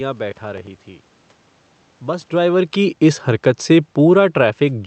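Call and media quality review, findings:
Processor overload crackle, 0.31–0.67 s: gritty tearing from missed deadlines repeating stale audio, fits a buffer of around 10 ms. Spectrogram shows broadband vertical streaks; waveform has hard-edged repeated segments.

Automatic gain falling, 2.32 s to end: AGC pulls gain down gradually, speech and background sinking together. Waveform envelope tapers steadily; spectrogram darkens evenly across all bands.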